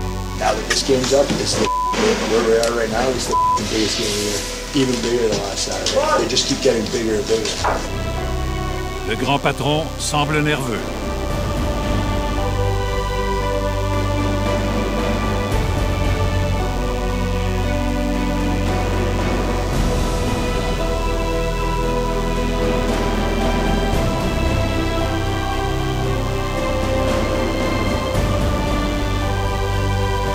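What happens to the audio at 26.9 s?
At 26.9 s you've still got the DECT cordless phone buzz, which runs the whole clip: a thin 100 Hz rasp with lots of harmonics, sitting roughly 20 dB under the sound, from a nearby handset's 10 ms radio bursts getting rectified.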